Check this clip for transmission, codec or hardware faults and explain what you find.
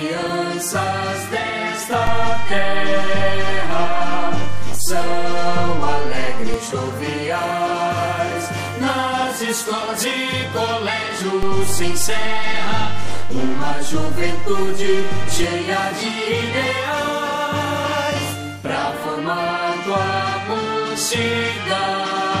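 Two DC steps are present. The first runs from 2.07 to 6.54 s, the second from 11.43 to 15.44 s. Each time, the waveform's zero line jumps by about -10 dBFS and about -11 dBFS, then returns. Each jump and return gives a low thump or click, while the sound continues unchanged.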